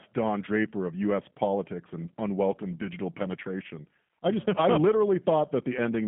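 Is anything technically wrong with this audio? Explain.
Yes. Throughout, the speech sounds narrow, slightly rough and synthetic, confined to roughly 150 Hz to 3.4 kHz. This points to the G.729 codec at about 8 kbit/s, which rebuilds each 10 ms frame from a vocal tract filter, a pitch predictor and a few pulses.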